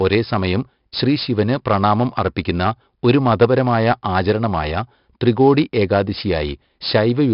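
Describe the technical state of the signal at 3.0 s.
At 3.0 s the speech carries 4-bit ADPCM compression, present across the whole recording rather than at that moment alone. Each sample is coded as a coarse 4-bit step from a predicted value, so the quantisation error becomes a gritty hiss riding on every loud syllable and scaling with it, plus roughness on sharp onsets where the step size lags. The damage is heavy. Nothing reaches above 5.3 kHz, giving a dull, narrowband tone that fits a bitrate of about 44 kbps.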